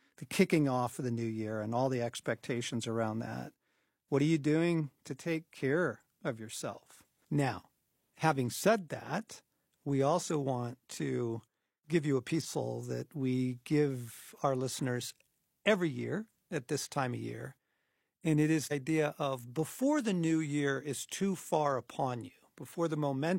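At 12.40–12.46 s, after "to give you a", and 18.67–18.72 s, after "it is", damaged data in a compressed stream throws the decoder out of sync. Each event is a short disruption of about 50 ms.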